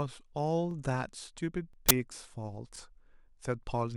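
A small stutter, a tiny doubled flick in the speech, interrupts the flow at 0.71–0.74 s and again at 1.73–1.76 s. These are overlapping chunks: the audio was handled in 1.0 s pieces, and each piece begins about 23 ms before the previous one finished, so that sliver plays twice at every join.

At 1.89–1.91 s a harsh, loud burst of digital noise cuts through. This is an uninitialised buffer: a 20 ms block was sent to playback before any audio had been written into it, so whatever leftover values sat in memory were played as samples.

The overlapping-chunks stutter returns at 2.76–2.78 s, keeping the same one-second spacing.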